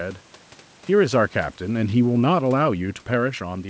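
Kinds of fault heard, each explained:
Automatic gain falling: the call's gain control judged the input too loud or its background noise too strong and turned itself down step by step, so from about 1.01 s to 3.41 s the level eases down by about 5 dB. Unlike the talker shifting position near 1 s and again near 3 s, which changes only the voice's level, this slow descent pulls the room noise down along with the speech, so the background sinks in step with the voice.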